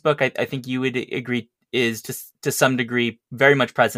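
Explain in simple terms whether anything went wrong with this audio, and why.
Listening to the recording, nothing stood out as having gone wrong with the sound.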